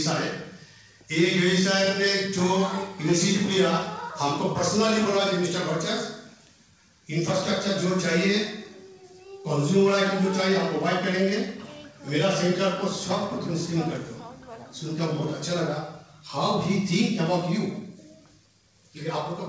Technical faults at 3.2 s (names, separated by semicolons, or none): none